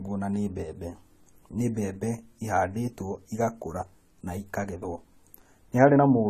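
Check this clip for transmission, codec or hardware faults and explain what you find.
One codec fault runs through the whole speech clip. Throughout, AAC compression damage is plainly audible: the encoder's lowered cut-off leaves nothing above 14.1 kHz, and sibilants fizz and warble, which a plain low-pass wouldn't do. It is likely AAC-LC near 32 kbps.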